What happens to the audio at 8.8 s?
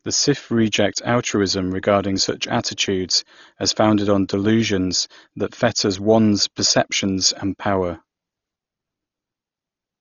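At 8.8 s the speech carries the same damage heard throughout: dull and band-limited, with rough, fluttering noise around tones, likely from Dolby Digital compression at a rate near 32 kbps. Starved frequency lines are refilled with dither noise. A spectrogram shows nothing above 6.9 kHz and speckled, smeared harmonics.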